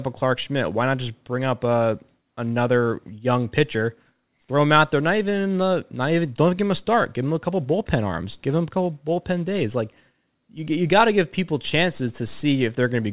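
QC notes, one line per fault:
No faults found in this speech recording.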